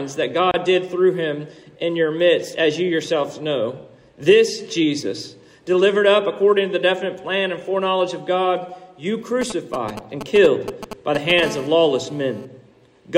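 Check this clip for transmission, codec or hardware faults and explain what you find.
Three faults show up: a brief dropout near the start, then two stretches of interference from a 2G phone close to the equipment.

Gap at a join of encoded pieces, 0.51 to 0.54 s: the sound cuts out for about 27 ms and then resumes right where it left off. That points to separately encoded chunks being butted together without trimming, so the encoder's start-up delay and end-of-file padding survive as dead air. The codec smears the edges, so it reads as a tiny hiccup rather than a fade.

GSM signalling bursts, 9.42 to 11.40 s: a galloping dit-dit-dit of short 217 Hz buzzes cuts in, at roughly 10 dB under the programme. A nearby handset is sending only occasional groups of radio bursts, the kind of traffic it sends while setting up a call or receiving a message, and the audio circuitry rectifies them into audible short stubs of 217 Hz buzz.

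GSM phone buzz, 11.43 to 12.45 s: right after the signalling, the pattern turns into a continuous hard, raspy buzz at 217 Hz with plenty of harmonics, sitting about 17 dB below the signal and having nothing to do with it. Here the phone is in a call and transmitting its bursts 217 times a second without a break. The circuitry demodulates that pulse train into a steady, gritty drone for about a second.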